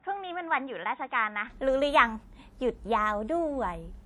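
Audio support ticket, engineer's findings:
WMA compression, whole clip: ringing, washy smear with hiss that swells and fades with the signal; weak detail dropped; band still reaches about 19.7 kHz. Likely cause: long-block transform coding at a low rate, consistent with WMA 1 near 48 kbps.

Input switched to a poorer device, 0.0 to 1.5 s: dull, narrow sound cut off above 3.8 kHz, about 5 dB quieter, faint added noise well below the signal. Clears abruptly at 1.5 s, no gap. Likely a fallback microphone or headset call profile.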